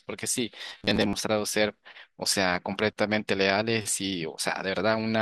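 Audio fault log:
0.69–1.15 s: robotic sound from repeated short buffers. The speech turns into a stiff, metallic buzz locked at 100 Hz that still loosely follows the words, likely because a 10 ms segment is replayed whenever new audio arrives late, replacing roughly half the material.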